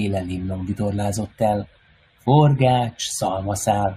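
Nothing in this speech recording is technically at fault.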